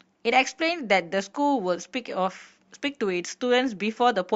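Speech recording, no technical faults heard anywhere in it.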